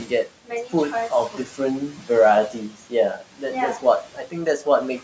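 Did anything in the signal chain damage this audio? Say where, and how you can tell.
Yes. Call processing caused noise suppressor artifacts throughout: background noise is gated down about 12 dB between phrases. A spectrogram shows a patchy, flickering noise floor.

Speech cut by the noise suppressor occurs at 0.05–0.73, 1.1–1.59, 1.92–2.09, 2.52–3.43 and 3.79–4.66 s. Parts of the speech are swallowed, dropped about 9–13 dB for around 0.15–0.2 s each. These show as notched waveform envelopes and missing spectrogram energy.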